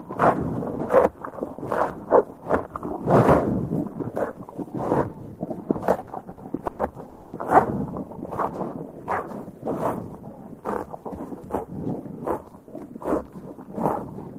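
At 6.01 to 6.10 s, 6.31 to 6.40 s and 6.67 to 6.82 s, bursts of packet loss hit the sound. The receiver extends what came before for 60, 60 and 120 ms, fading it into a smeared buzz or hiss. A spectrogram shows each as a blurred, decaying patch, followed by a jump once the audio resumes past the missing part. From 7.09 to 7.36 s, a stretch of about 240 ms is filled by a fading continuation with no silence. This is likely a long network dropout, and the waveform shows a tapering envelope before the signal resumes.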